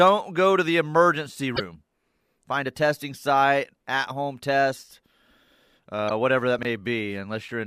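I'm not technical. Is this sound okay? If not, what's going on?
No. There are two kinds of fault in this speech recording.

The first is damaged data in a compressed stream. The recording was stored or sent in a squeezed, compressed form, and two stretches of that data were corrupted. When the player hit the bad parts, it misread them and had to hunt for the next good point to pick up from. You hear this as brief chirps, squawks, clicks or short gaps from about 1.53 to 1.60 seconds and again from 6.06 to 6.11 seconds.

The second is chunks out of order. Sound is handled in small pieces, and here one 20-millisecond piece arrived two pieces late, so it played after audio that should have come after it. Nothing is missing, but the order is scrambled, creating three abrupt joins. Around 6.59 to 6.65 seconds, that comes across as a tiny jumbled moment.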